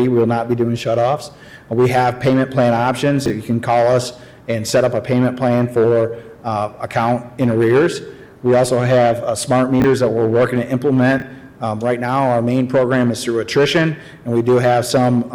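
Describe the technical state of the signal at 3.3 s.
Chunks out of order from 3.26 to 3.3 s: one 20 ms chunk plays one slot late, giving a brief jumbled stutter at the hard joins. No audio is missing, unlike a dropout.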